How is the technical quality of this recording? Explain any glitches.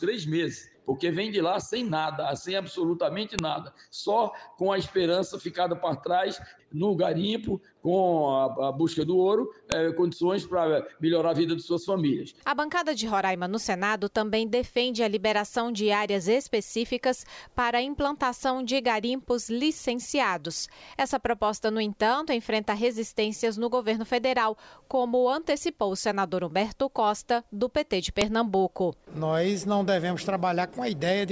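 The recording has three sharp glitches caused by a file header played as audio. They occur at 3.39 s, 9.72 s and 28.21 s. Separate WAV segments were joined without stripping their headers, so those few dozen header bytes are decoded as samples. Each one is heard as a brief, loud click or snap that cuts straight through whatever the sound is doing at that moment.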